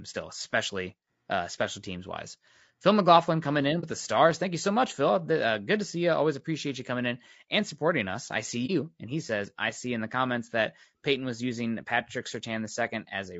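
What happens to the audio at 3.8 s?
Right after "coming in", there's a short hole from about 3.80 to 3.84 s before "the stars" picks up. That's AAC frame loss with muting: roughly 30 ms of audio goes missing, which fits a single lost frame, and the decoder zeroes that spectrum instead of guessing. Because the overlapping windows taper the sound out and back in, the gap comes across as a soft-edged dip rather than a hard cut.

Around that dropout, and through the whole clip, the speech has a rough, grainy texture, with noise filling in between the harmonics and a top end that sounds thin and somewhat synthetic. That's the sound of low-delay AAC compression, likely AAC-ELD running at a low rate, with the damage fitting something near 32 kbps. At that rate the codec has too few bits for the roughly 500 frequency lines in each low-delay frame, so they are quantized coarsely and the detail smears.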